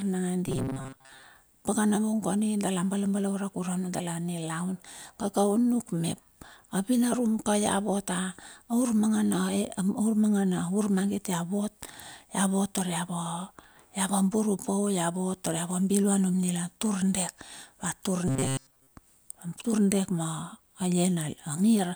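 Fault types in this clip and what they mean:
Robotic sound from repeated short buffers: at 0.47–1.23 s and 18.28–18.92 s the speech becomes a rigid metallic buzz locked at 133 Hz, likely an approximately 7.5 ms slice looped through most of each stretch. Unlike pitch shifting, the buzz never follows intonation.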